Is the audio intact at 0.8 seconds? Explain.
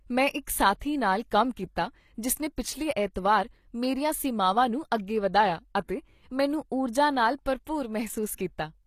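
No. Pre-echo smears the moment between 0.79 and 0.81 s, just after "ਮੈਂ ਇੱਕ" and before "ਨਾਲ ਕੰਮ". A short hiss of about 23 ms rises ahead of a sharp attack. The codec spreads its rounding noise across a whole block. The attack sits late in that block, so noise meant for the loud part leaks into the quiet gap before it. The onset loses its edge and sounds soft.

The whole speech clip also carries audible codec damage, likely from HE-AAC compression. The treble is rebuilt from copied lower bands rather than kept, and nothing sounds above 14.9 kHz. The rebuilt highs do not line up with the true harmonics. S sounds come out gritty and metallic. The damage is plain enough to fit a bitrate around 24 kbps.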